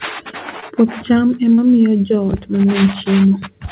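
Short concealed packet loss at 0.60 to 0.64 s and 1.54 to 1.60 s, just before "miyo joot": about 20 ms and 40 ms of late audio were patched by extending the preceding sound, leaving brief smeared wobbles in this narrowband call, which has nothing above 4 kHz.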